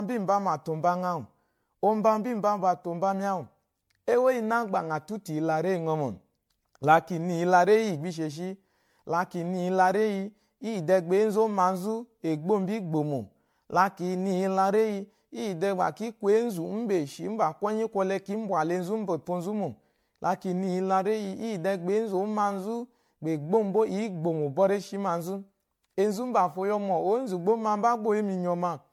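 Throughout the speech there's generation loss: a swirly, hollow, smeared sound with blurred attacks, likely from roughly ten passes through MP3, consistent with 96 kbit/s.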